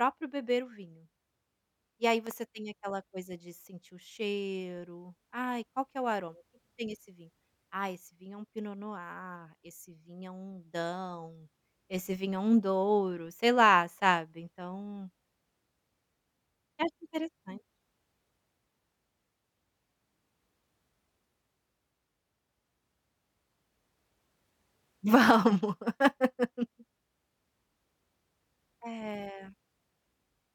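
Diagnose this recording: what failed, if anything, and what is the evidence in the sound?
A loud pop hits the speech at 2.27 s: two sharp transients in quick succession, ending by 2.33 s, peaking roughly 5 dB above the surrounding level, just before "tem aquela coisa de". The speech continues underneath without a break, so the signal path itself never dropped out. The stage is likely the analogue wiring: a voltage step from a plug, switch or static discharge added onto the signal and shaped by the circuits downstream.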